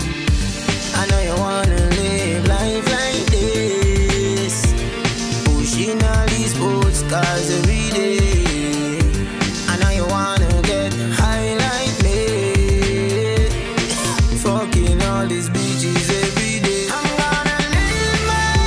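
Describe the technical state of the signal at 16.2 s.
At 16.2 s the signal is intact, with no dropout, distortion, glitch or other fault audible at that moment.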